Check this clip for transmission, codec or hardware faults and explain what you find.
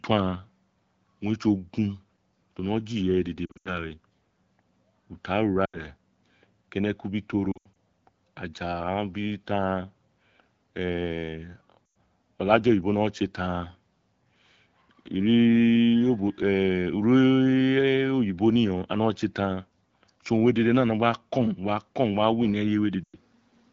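One kind of fault turns up, repeated five times: lost AMR speech frames. The codec itself sounds like AMR-WB at a rate that points to about 12.65 kbit/s, with only light coding roughness.

Lost AMR speech frames occur at 3.46–3.70 s, 5.66–5.79 s, 7.51–7.75 s (right after "keneku bi"), 11.86–11.96 s and 23.04–23.17 s. Corrupted frames fail their checks, so the decoder repeats the last good pitch and vocal-tract settings at falling gain. Each gap, about 80 to 160 ms of lost audio, is heard as a smeared, fading warble. At 3.46 s and 7.51 s the losses are scattered, causing stuttering dropouts before the speech recovers.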